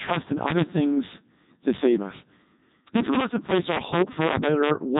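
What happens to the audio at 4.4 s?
Integer overflow is present at 4.4 s, as it is across the whole clip. The signal is driven about 4 dB past the integer limit, and a small fraction of peaks wrap to the opposite sign instead of being capped. Each wrap is a sharp, violent crack on the loudest moments of speech, harsher than ordinary clipping.

Codec 2 vocoder coding also shapes the sound at 4.4 s and throughout. Only pitch, voicing, energy and a coarse spectral envelope survive, and the decoder rebuilds the speech from sine waves. The heavy damage sounds robotic and buzzy, fits the 3.2 kbit/s mode, and has nothing above 3.8 kHz.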